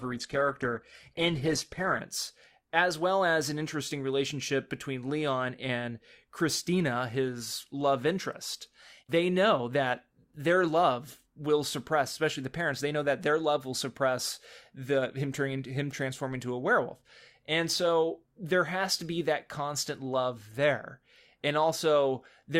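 From 0 to 2.0 s the speech plays as an adaptive stream starting at a low bitrate: nothing above 12.1 kHz, with heavier codec artefacts, consistent with Opus at about 12 kbit/s. At 2.0 s quality jumps without a gap as the player switches up.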